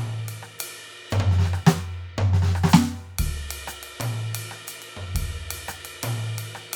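Nothing in this bit of music stands out as a technical problem, so there's nothing to point to along the way.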